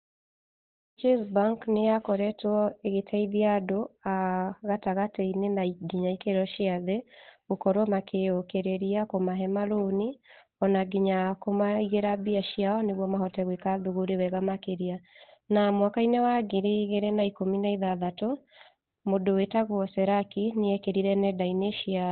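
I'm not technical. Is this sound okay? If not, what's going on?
No, it isn't. The whole clip sounds muffled and hoarse, like a cheap phone line, with nothing above about 4.2 kHz, so the speech lacks crispness. That's likely Opus compression squeezed hard into its speech mode. The gentle fade-in at the start, ending around 1 s, is fine.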